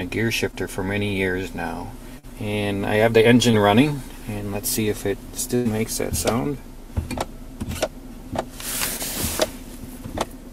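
At 0.51 to 0.55 s, 2.19 to 2.25 s, 3.51 to 3.55 s and 8.97 to 9.01 s there is short concealed packet loss. About 20 ms of audio failed to arrive (40 ms at 2.19 s), and the receiver patched each hole with 13 to 44 ms of extrapolated sound before crossfading back. Each one is heard as a quick smear or wobble. Unlike a dropout or a click, there is no silence, just a blurred instant.

From 5.55 to 5.67 s a burst of packet loss takes out about 100 ms at once. The concealment stretches the last sound across roughly 97 ms, fading it as it goes, so it comes through as a held buzz or a dying hiss rather than a brief smear. When the audio returns, a tenth of a second of material is simply gone. That skip, and the fade heard before it, set it apart from the brief patches elsewhere.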